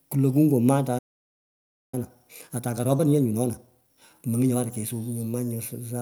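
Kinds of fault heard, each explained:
Playback stall: At 0.98 s the speech cuts off mid-flow and the output stays silent until 1.94 s, a gap of about 0.94 s. The likely cause is the player running short of buffered data or its audio thread being held up, leaving nothing to send to the output. On a waveform this is an abrupt drop to a flat line; on a spectrogram it is a clean vertical band of empty time across all frequencies.
Time-compressed catch-up: From 1.94 s to 4.94 s the speech runs at 1.25 times normal speed with its pitch unchanged, as the player works off the backlog left by the stall. It does this by dropping short slices of audio and cross-fading across the joins, which gives a hurried delivery. A spectrogram shows syllables and harmonics packed closer together in time at the same frequencies, with small seams where slices meet.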